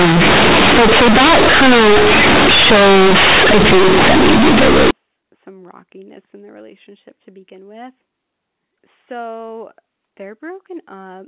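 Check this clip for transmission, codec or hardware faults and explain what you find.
There's one clear fault, and it sits right at the start of the speech.

From 0.00 to 4.91 s you get companded audio read as linear. A-law bytes are being played straight as plain 8-bit samples without expansion, so every sign flip throws the output across roughly half its range and quiet passages come out as loud as peaks. It sounds harsh and buzzy, very loud, with heavy noise filling the gaps. After that the G.711 A-law path decodes properly, with its usual 4 kHz ceiling.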